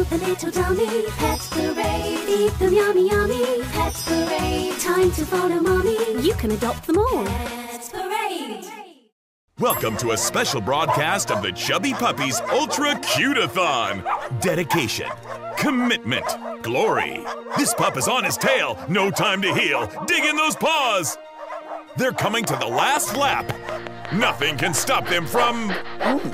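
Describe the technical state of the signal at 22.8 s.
At 22.8 s the signal is inside a train of clicks that runs from 22.44 s to 24.79 s. Sharp pulses of much the same shape tick over the sound at a regular 5.55 per second, roughly fifteen in all. Their peaks stand around 15 dB above the surrounding audio. The steady repeating pulse likely comes from interference from nearby equipment or a faulty connection or power supply injecting the same spike again and again.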